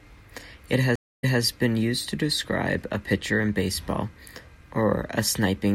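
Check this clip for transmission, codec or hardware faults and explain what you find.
There is one transmission fault. A stream reconnect runs from 0.96 to 1.41 s. The connection dropped, the player went quiet for about 0.25 s, then rejoined and started a new decoder partway through the stream. The server resent a short burst, so playback picks up roughly 0.21 s earlier than where it stopped, repeating a short stretch of speech before "been used to describe". The restarted audio comes in muted or faded for its first frame or so.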